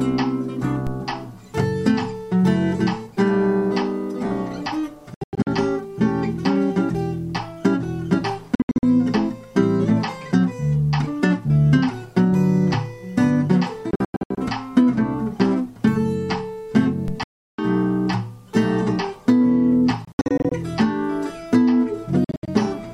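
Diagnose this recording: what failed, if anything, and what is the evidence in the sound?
DC step at the converter stage: low thumps at 0.87 s and 17.08 s, where the zero line jumps and then decays through a 5 Hz high-pass.

Bluetooth dropout at playback: silent holes at 5.14–5.47, 8.55–8.83, 13.91–14.38, 17.23–17.59, 20.05–20.52 and 22.24–22.48 s. The sound resumes further on. Late wireless packets were likely dropped.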